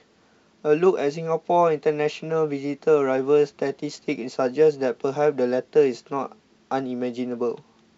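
Nothing goes wrong anywhere in the clip, and the speech simply comes through G.722 wideband telephone coding at 64 kbit/s with the band reaching up to about 7 kHz and at most a faint trace of the coder in the top end.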